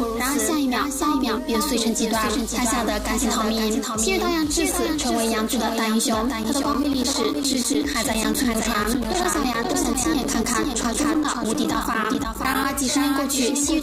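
A second, slower capture path or a misaligned edit has likely mixed the audio in twice, creating a doubled audio track throughout. A full-band copy trails about half a second behind, roughly 5 dB quieter, with no decay or room colour, so every sound is followed by a clean, distinct repeat.

From 6.43 s to 12.65 s, a background task repeatedly blocks the USB bus or audio driver, causing periodic USB or driver dropouts. Every 100 ms, about 10 ms of audio is replaced with silence, producing an evenly spaced train of ticks that are audible only while sound is present.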